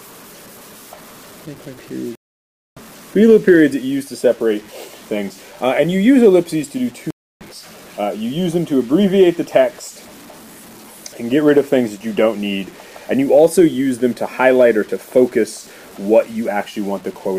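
A grainy, gritty distortion runs through the whole clip. It rides on the sound itself, sitting roughly 30 dB below it, and quiet passages break up or sputter. This is low bit depth without dither, likely from truncation to around 7 bits.

At 2.15 s the audio drops out for 0.61 s and resumes about 0.7 s further on. At 7.11 s it goes silent again for 0.30 s and jumps ahead by roughly 0.4 s. Both are stream reconnects: the connection broke, a fresh decoder restarted mid-stream, and the skipped material was lost.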